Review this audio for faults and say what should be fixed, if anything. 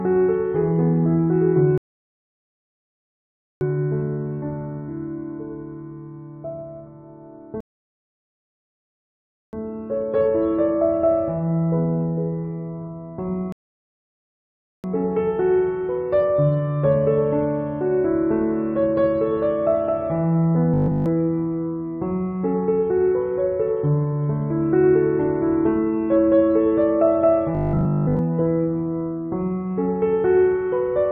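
Three rebuffering stalls occur, at 1.78–3.61 s, 7.60–9.53 s and 13.52–14.84 s. Each time the player ran out of downloaded audio, fell silent, and resumed exactly where it stopped, adding 1.83 s, 1.93 s and 1.32 s of dead air with no material lost. Prevent this with a larger startup and playback buffer, or with adaptive bitrate switching so throughput keeps ahead of playback.

Robotic sound from repeated short buffers appears at 20.74–21.06 s and 27.55–28.19 s. The audio turns into a rigid, metallic buzz at a fixed 50 Hz that only loosely follows the underlying sound. The likely cause is that new data arrived too seldom and the software kept replaying its last block in place of the skipped audio. A 50 Hz repetition fits a block of about 20 ms. Essentially the whole first span is repeated material, and most of the second. Prevent this by sizing the jitter buffer for real arrival variance and using proper concealment rather than raw block repetition.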